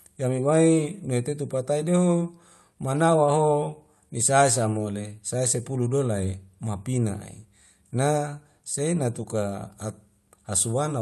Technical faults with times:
none

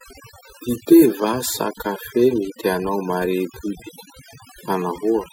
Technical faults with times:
0.00-5.32 overdone noise removal

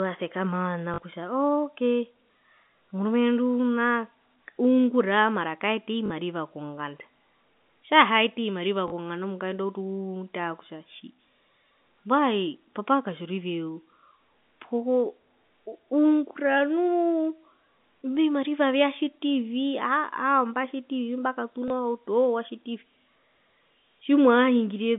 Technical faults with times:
0.94-0.98 packet loss with last packet repeated
6.06-6.10 packet loss with last packet repeated
8.88-8.92 packet loss with last packet repeated
21.68 packet loss with last packet repeated

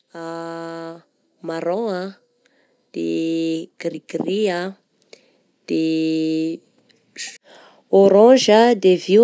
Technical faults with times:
0.12-2.16 automatic gain rising

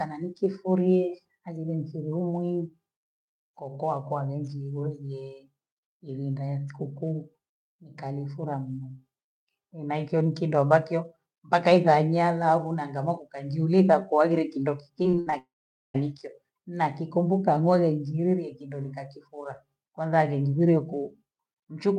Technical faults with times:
15.03-15.34 repeated packet loss (robotic sound)
15.38-15.96 long network dropout

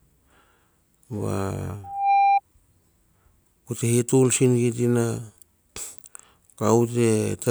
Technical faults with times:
1.83-2.41 loudspeaker feedback squeal

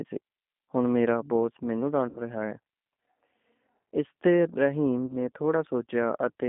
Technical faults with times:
0.00-6.48 G.729 codec
2.09-2.20 VoIP packet loss concealed by the speech codec
5.06-5.15 VoIP packet loss concealed by the speech codec

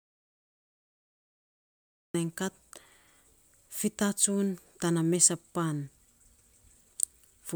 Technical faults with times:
0.00-2.14 audio dropout to silence

